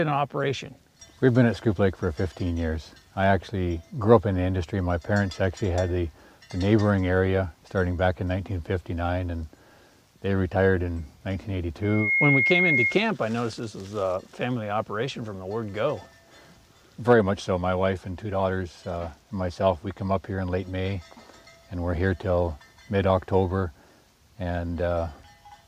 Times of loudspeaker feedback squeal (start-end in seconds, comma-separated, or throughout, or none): 11.82-13.03